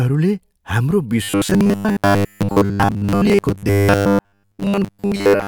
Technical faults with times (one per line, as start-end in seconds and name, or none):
1.23-5.47 robotic sound from repeated short buffers